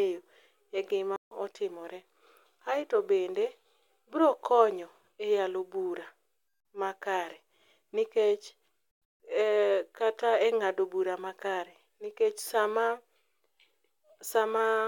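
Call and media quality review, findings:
Playback stall at 1.16–1.31 s: speech cuts to silence for about 150 ms, then resumes. Likely player starved of data or thread blocked, output held silent until recovery.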